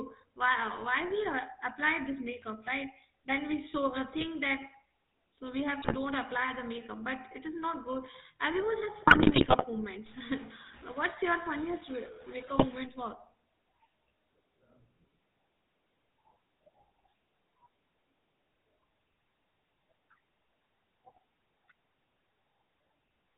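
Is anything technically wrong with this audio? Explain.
Yes. The whole clip carries GSM full-rate codec damage, consistent with 13 kbps GSM. Its pulse-driven vocal-tract model makes the speech buzzy and gravelly, and the spectrogram shows nothing above 4 kHz.

GSM bit errors strike at 4.18–4.26 s, 5.82–5.96 s, 9.02–9.65 s and 12.58–12.65 s. Corrupted filter, pitch or gain values produce squawks and pops, seen as sudden level spikes and smeared spectral bands.

From 10.06 to 12.85 s a distortion, likely a stuck bit, offsets half the samples, so the waveform shows stepped edges and the gaps fill with noise.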